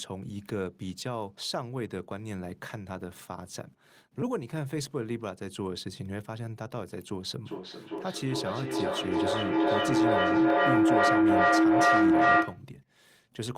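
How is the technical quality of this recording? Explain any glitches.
The recording is marred by a feedback howl. From 7.45 to 12.69 s, a loop between a nearby microphone and loudspeaker gains level on each pass. The sound narrows to a tone around 300 Hz, with repeats roughly every 0.4 s. It peaks about 11 dB above the speech.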